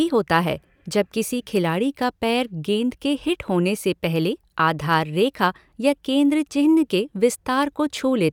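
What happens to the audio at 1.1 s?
Nothing goes wrong at 1.1 s; the speech carries through that moment intact, with no dropout, click, distortion or other fault to be heard.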